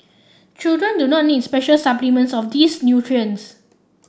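No technical faults are audible.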